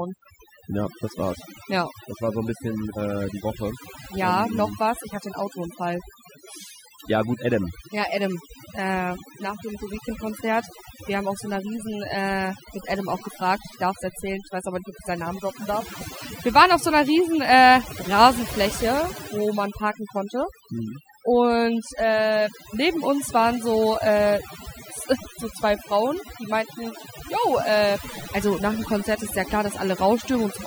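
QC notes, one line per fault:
throughout, overdone noise removal: a noise reduction stage was pushed far too hard on a noisy speech recording, so every frequency band sitting near its noise estimate gets cut deeply or shut off, and the softer parts of the voice fall below that line and vanish along with the noise. What remains is a background gone quieter but scattered with twinkling specks.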